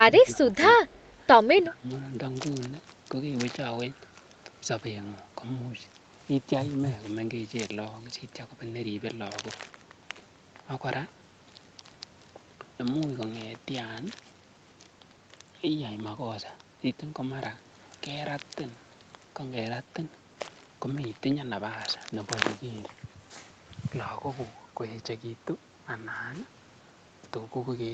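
Right at the start, from 0.02 to 0.6 s, the speech gets pushed down in level, by as much as roughly 15 dB at its worst, and there's a shorter, milder dip of about 5 dB from 0.86 to 0.91 s. A deeper one comes back from 1.52 to 1.89 s, again around 15 dB. That pattern is likely speech suppressed in double talk: the echo canceller couldn't tell the near talker apart from the far side's loudspeaker echo while both were active, so it ducked everything.

Squeezed between those dips, from 0.95 to 1.09 s, there's a faint ghost of the voice trailing the original by 169 ms. It sits very low, somewhere around 40 dB under the main speech, so it's easy to miss unless you're listening for it. That's likely an echo leak, where a bit of loudspeaker pickup slipped past the canceller and got sent back down the line.

The audio tops out at 8 kHz throughout, which fits the Opus call path and is expected here.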